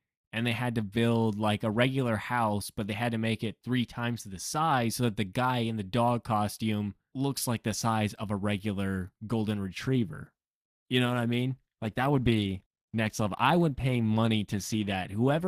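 Speech clip with an adaptive stream at a lower bitrate: from 9.80 s to the end, just after "of a regular golden", quality suddenly drops and codec artefacts rise with no gap, consistent with a switch from roughly 64 to 16 kbit/s Opus.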